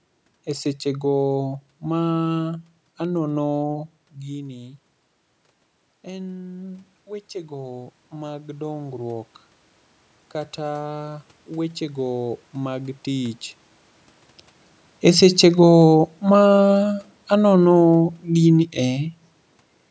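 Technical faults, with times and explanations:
6.04–9.34 s, automatic gain rising: the voice dropped about 14 dB, so gain crept up about 7 dB; voice and room noise swell together as the waveform envelope and spectrogram noise floor ramp upward.
15.0–18.66 s, automatic gain falling: the input was too loud, or its noise too strong, for the gain, so gain eased down about 5 dB; speech and background sink together as the envelope and noise floor taper off.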